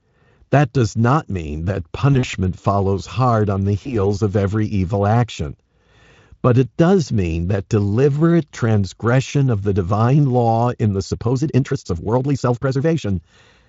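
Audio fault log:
2.13–2.35 s, VoIP packet loss concealed by the speech codec: after "does not mean that", the speech turns buzzy and thins out in stutters, with gaps scattered over about 200 ms, the longest run near 40 ms, which fits about five lost 20 ms frames. The decoder filled each gap by extending its last pitch and filter at falling gain, so the repair is audible as a fading tone. Because each frame leans on the one before, the weakness lingers after packets resume, up to "follows hard on the".
3.83–3.97 s, VoIP packet loss concealed by the speech codec: between "follows hard on the" and "of every evil action", a short buzzy dip, consistent with a single lost 20 ms frame. The decoder bridged it by extrapolating the previous frame, and the damped recovery stretches the blemish to roughly 140 ms.
11.07–13.09 s, time-stretched section: after "divine law in the", the pace jumps to 1.58 times normal speed while pitch holds steady, so the delivery turns rushed. 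This is likely software squeezing the passage to fit a length, keeping pitch by dropping short slices of audio. The Speex coding underneath, at a setting that fits about 34 kbps, shows at most faint coding damage.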